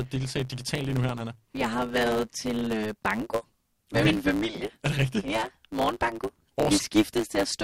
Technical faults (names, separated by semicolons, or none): block size mismatch (truncated)